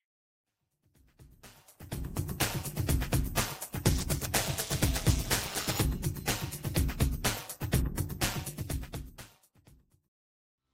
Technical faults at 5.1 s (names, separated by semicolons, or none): overlap-add ripple